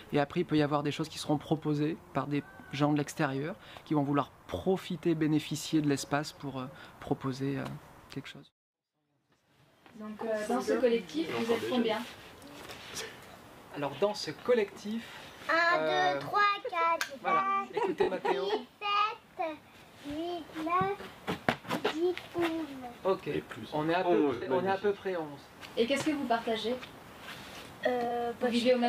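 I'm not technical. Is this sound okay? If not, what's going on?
No, there are three small glitches. At 18.03 to 18.09 s, 24.34 to 24.50 s and 28.08 to 28.11 s the sound is briefly damaged. That's a corrupt frame concealed: a few tiny chunks of the compressed file got damaged, the player noticed, and it papered over each gap by muting it or filling in a blurred copy of what came just before.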